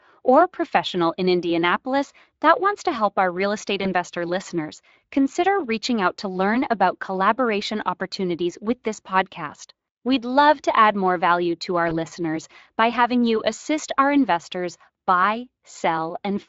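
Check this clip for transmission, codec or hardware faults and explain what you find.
There are two short dropouts, both VoIP packet loss concealed by the speech codec, at 3.83 to 3.90 s (after "help our real estate", before "listeners consider reaching out") and 11.89 to 11.98 s (after "more value to our"). Each gap fits a single lost 20 ms frame. The decoder fills it by stretching the last pitch and filter, giving a brief buzzy or noisy smear before the voice settles again.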